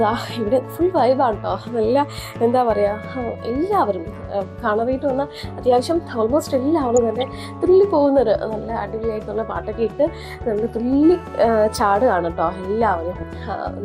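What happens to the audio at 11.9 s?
A nearby 2G phone on a call is transmitting in bursts about 217 times a second, and the audio circuit rectifies those radio pulses. The result is GSM phone buzz from 11.03 to 12.14 s, a hard, raspy 217 Hz buzz rich in harmonics, about 32 dB below the signal.

Underneath, the whole clip carries plainly audible damage that is likely MP2 compression at a low rate, consistent with around 80 kbps. Starved sub-bands drop out or are coarsely quantised, leaving the sound dull, with a gurgling, granular edge.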